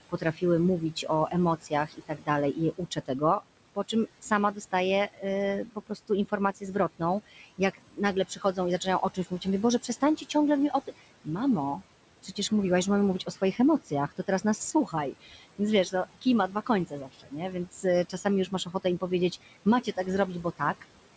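Across the whole recording the background dips in the gaps and swells back under the speech. These are noise suppressor artifacts: the suppressor judges each frequency band frame by frame, pulling down what it treats as steady noise by about 18 dB. The room noise sits about 17 dB below the speech.

From 0.09 to 12.51 s, up to the words "mówiłaś że mamy", scattered soft consonants and word endings sound swallowed or suddenly faint, about three seconds' worth in total. This is speech cut by the noise suppressor: quiet speech energy was mistaken for background and turned down with it, by as much as about 19 dB at its deepest.

From 13.19 to 20.83 s, after "mówiłaś że mamy", the same swallowing returns more lightly. About a second and a half of speech is affected, with drops reaching about 17 dB, as the suppressor again classes faint speech detail as noise. The audio is band-limited to 8 kHz throughout, which fits the G.722 call codec and is not a fault.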